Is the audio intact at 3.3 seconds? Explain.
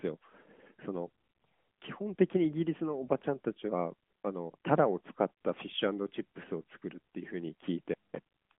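Yes, the speech at 3.3 seconds is intact, carried without any fault through the AMR narrowband mobile codec at 12.2 kbps on its usual 150 Hz to 3.4 kHz phone-line band.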